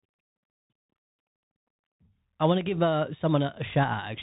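From start to finish the speech carries the sound of a Bluetooth CVSD headset codec, which fits a 64 kbps link. CVSD sends a single up-or-down bit per sample and adapts its step size, so it can't follow fast, loud movements cleanly. Here that damage is plainly audible: everything above about 3.8 kHz is gone, leaving a boxed-in phone tone, with gritty, scratchy sibilants and a fine granular hiss sitting underneath.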